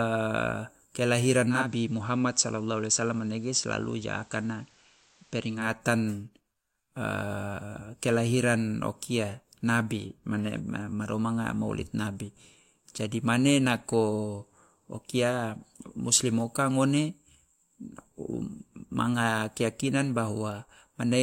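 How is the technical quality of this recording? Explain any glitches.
The recording has one glitch, a digital radio blending to analogue from 1.46 to 5.74 s. The receiver lost its digital stream and cross-faded over about a quarter of a second to the station's FM broadcast, returning to digital at the end. During that stretch the sound drops about 2 dB in level and picks up a steady hiss sitting roughly 30 dB under the programme.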